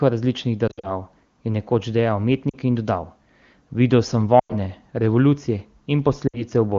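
Lost AMR speech frames break up the speech at 0.68–0.91 s, 2.50–2.56 s, 4.39–4.54 s and 6.28–6.43 s. The decoder bridges each gap by repeating the last good pitch and vocal tract settings at falling gain, producing brief warbling, smeared dips. The first episode is patchy, scattered across about 0.16 s.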